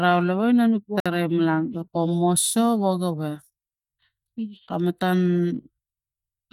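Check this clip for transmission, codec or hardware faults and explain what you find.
One transmission fault is audible in this speech clip. A Bluetooth stall runs from 1.00 to 1.06 s. The speech drops to about 56 ms of silence and then resumes. The likely cause is interference holding up wireless packets, so the headphones' buffer emptied and playback paused until retransmitted data arrived.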